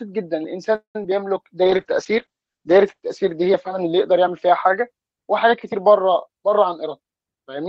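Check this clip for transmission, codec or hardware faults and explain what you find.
Four faults can be heard in this speech clip, clustered early and toward the end.

From 0.75 to 0.96 s there is a call audio freeze. The sound trails off into a fading buzz and then about 110 ms of silence before resuming exactly where it stopped. This likely comes from packets held up in transit, leaving the jitter buffer empty for about 195 ms. Nothing is lost, but the delay grows by that amount.

At 1.03 s there is a short concealed packet loss. A brief smear or wobble interrupts the sound where roughly 20 ms never reached the decoder in time. The receiver extrapolated from the preceding audio to bridge the hole, then blended back into the real signal.

From 1.65 to 7.49 s there is a call bitrate drop. The audio turns rough and muffled, with the top end gone. The encoder was forced from 64 kbps down to 13 kbps, narrowing the bandwidth from 20 kHz to 8 kHz, and it stayed at its lowest for 1.15 s.

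From 6.27 to 7.67 s there is a jitter buffer speed-up. The speech sounds hurried, running at 109% speed with unchanged pitch. After excess audio accumulated in the buffer, the receiver repeatedly cut out pitch-period slices, removing around 150 ms in total to bring the delay back down.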